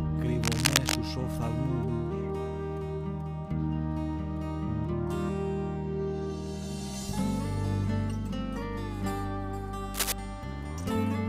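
From 0.43 to 0.97 s and again from 9.94 to 10.13 s, cable scratch noise: dense, uneven rustling bursts about as loud as the sound itself, likely a worn connector being moved, unlike isolated clicks.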